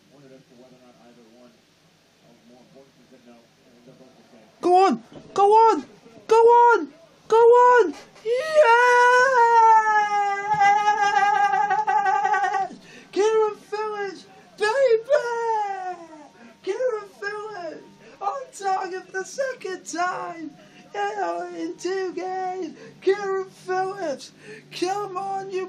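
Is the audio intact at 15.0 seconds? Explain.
Yes, the audio at 15.0 seconds is intact, with no dropout, click, distortion or other fault at that moment.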